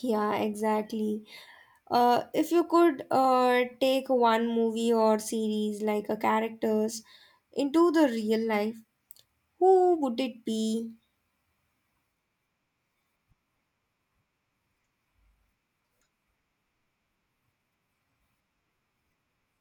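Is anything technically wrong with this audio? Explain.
Yes. At 0.60 s there is a block of digital silence: the output buffer was likely not filled in time, so about 1.3 ms of zeros, which fits a 64-sample block, was played. The signal drops to nothing and returns with no fade, so it is heard as a tick.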